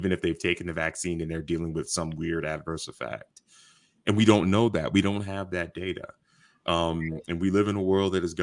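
Nothing technical to flag in this speech recording; there's no fault to point to anywhere in it.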